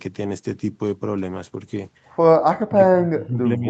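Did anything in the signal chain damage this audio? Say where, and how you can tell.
Yes, in the call processing stage. From 2.69 s to the end, the speech sinks by around 30 dB at its deepest. This is speech suppressed in double talk, likely by the echo canceller. With both sides talking, it mistook the talker for echo and turned everything down.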